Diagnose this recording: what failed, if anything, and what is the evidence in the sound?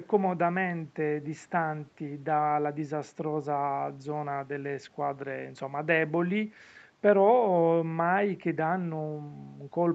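Nothing failed in this speech recording, and no stage shows a fault. The content stops at 8 kHz, which is the bandwidth of the call's microphone processing and the Opus codec in the WebRTC call path.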